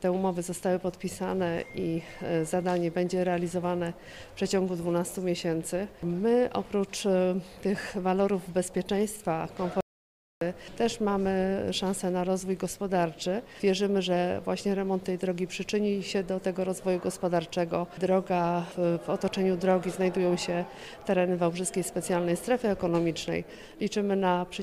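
Audio dropout to silence, 9.81 to 10.41 s: the sound cuts off abruptly, leaving 0.61 s of silence with no room tone, then resumes mid-flow. The likely cause is a lost input while recording kept writing silence, so that stretch is gone.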